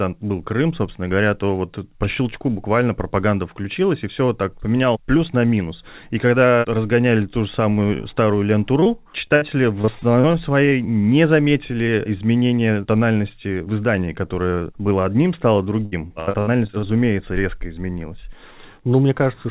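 Speech over a call link whose band stops at 4 kHz, consistent with a G.711 telephone codec, with repeated packet loss (robotic sound) at 8.8 to 9.43 s, 9.81 to 10.73 s and 15.85 to 16.88 s. Short runs of lost packets, up to 77 ms in the last burst, were patched by extending the preceding sound, giving a choppy stutter. On a spectrogram these show as smeared, repeated harmonic slices and abrupt breaks. The waveform shows clipped-off segments and copied periods.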